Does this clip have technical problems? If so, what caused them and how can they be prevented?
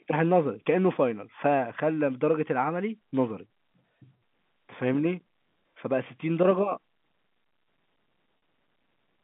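Yes. Packet loss with pitch repetition occurs from 8.38 to 8.42 s: about 40 ms of audio is missing, which fits two lost 20 ms packets. The receiver bridged the gap by repeating the last pitch period, so the sound briefly holds as a slightly buzzy, sustained tone instead of dropping out. Unlike a plain dropout or a click, there is no silence or sharp edge. The G.711 telephone band above it is unaffected. Jitter buffering and forward error correction on the network path would prevent it.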